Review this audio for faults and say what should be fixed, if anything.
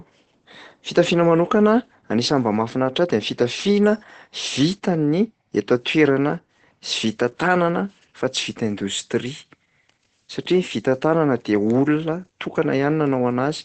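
Opus voice compression, throughout the clip: nothing sounds above about 8.6 kHz, which points to wideband SILK coding, and the coarsely coded excitation leaves the speech muffled, hoarse and faintly robotic, which fits a low bitrate of around 12 kbps. Encode from the original source at a higher Opus bitrate to prevent this.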